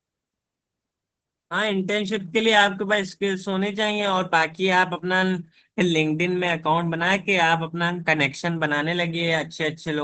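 Speech, and the whole clip carries plainly audible Opus voice compression. Nothing above about 8 kHz gets through, so it sounds muffled, and the voice has that hoarse, slightly robotic edge you get when SILK's linear-prediction coder only has enough bits for a coarse excitation signal. That band limit and roughness fit the wideband SILK mode at a low rate, around 12 kbps, with the usual 20 ms frames.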